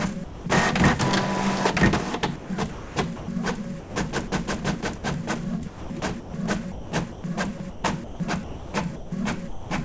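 At 0.24 s the sender's voice detector likely judged the sound to be background and stopped sending, so a sound dropped by the voice detector leaves about 220 ms of steady comfort noise until transmission resumes at 0.46 s. From 2.36 to 3.28 s the detector likely toggled repeatedly, and the sound is chopped by the voice detector, with about 500 ms of it replaced by synthetic noise in more than one piece. The same likely switching returns from 3.80 to 4.32 s, where about 200 ms gives way to comfort noise. At 4.98 s a brief dropout, likely from the detector gating again, swaps about 60 ms of sound for noise until 5.04 s. From 5.68 to 9.70 s the detector likely kept cutting in and out, so roughly 1.7 s of the sound is lost to comfort noise in a long choppy stretch. Throughout, the audio carries nothing above 8 kHz, which fits a wideband call codec.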